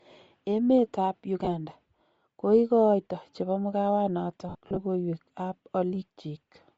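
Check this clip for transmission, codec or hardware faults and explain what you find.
Two faults are audible: steady codec damage across the whole speech clip, and two dropouts where audio frames went missing.

Throughout, the speech has a breathy, grainy top end, with the upper spectrum sounding like hiss. That points to Bluetooth LC3 compression as the likely cause, at a rate that fits about 32 kbps. The encoder drops much of the high band and the decoder fills it with shaped noise. This differs from MP3-style swirl because the graininess is even and noise-like rather than warbling.

Lost LE Audio frames occur at 1.45 to 1.48 s, a short gap of about 20 ms, and again from 4.49 to 4.78 s, where about 180 ms is lost in patches spread over 280 ms, the longest stretch around 70 ms. The decoder repeats the last spectrum with randomised phase, so the sound briefly smears into noise and then fades. 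That noisy smear, rather than a hard click or silent gap, separates this fault from a plain dropout.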